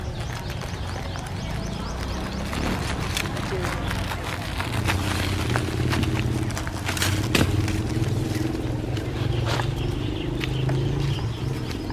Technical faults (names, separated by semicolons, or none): none